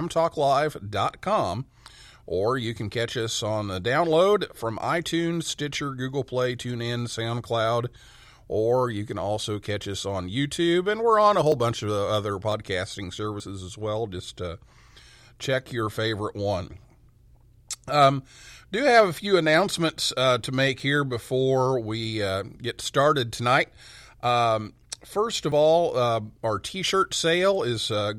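At 11.52, 12.52, 13.4, 20.8 and 25.52 s the speech jumps forward, each time losing something like 40 ms without any gap of silence. This is most likely a dropped buffer (overrun): samples were overwritten before being read, and the two sides were spliced together. On a waveform each shows as an abrupt discontinuity; on a spectrogram, a thin full-height vertical line where the harmonics break off and resume out of step.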